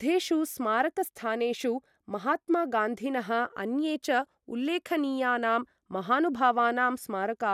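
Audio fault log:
throughout: generation loss. The speech was likely encoded about three times with a lossy codec, consistent with MP2 near 128 kbit/s, each pass requantising on a shifted frame grid. Accumulated noise makes it swirly, hollow and smeared, with blurred attacks and nothing above 17.2 kHz.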